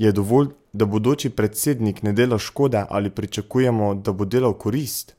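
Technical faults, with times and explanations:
Nothing to flag here; this bit of speech came through without any technical trouble I could pick out.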